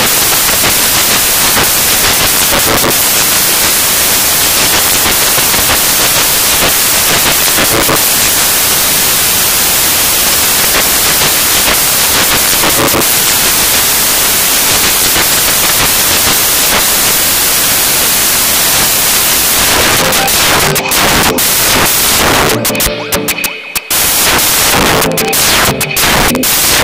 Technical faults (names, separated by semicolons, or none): samples built from the wrong bytes